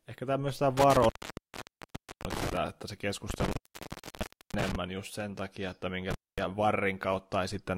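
Speech is repeatedly cut by an intermittent contact, a loose connection opening for about 1.16 s within 0.77–2.57 s, about 1.03 s within 3.30–4.75 s, and about 0.24 s within 6.11–6.38 s. The waveform collapses to a near-flat hiss floor, bracketed by crackle spikes that show as vertical broadband streaks on a spectrogram.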